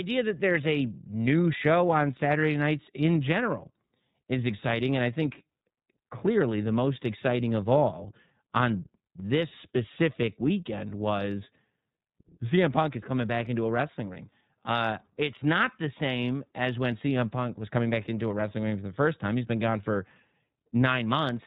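Throughout the speech, the iLBC codec limits the sound to narrowband, with nothing above 4 kHz, and gives it a plainly audible rough, slightly synthetic grain. This comes from coding each frame's excitation independently, which fits 30 ms frames at 13.33 kbps. Unlike packet-loss concealment, the roughness is steady rather than in bursts.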